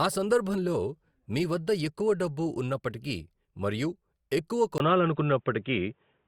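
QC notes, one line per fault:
4.78–6.27 s, input likely switched to a poorer device: after "డబ్బు ఉన్నప్పటికీ మరియు ఎక్కువ" a 20 ms gap, then dull sound with nothing above 3.8 kHz, a level step of a few dB and a faint new noise floor. A mere filter wouldn't change noise and level together.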